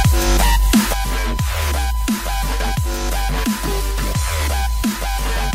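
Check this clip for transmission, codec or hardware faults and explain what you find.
One hardware fault is present: USB whine. It runs through the whole clip. A steady tone sits at 1 kHz, and that is also its strongest component. It lies roughly 20 dB below the wanted sound. The USB bus draws current in 1 ms frames. That draw pulses at 1 kHz. It leaks into the audio path through shared power or ground. The result is a fixed-pitch whine under the audio.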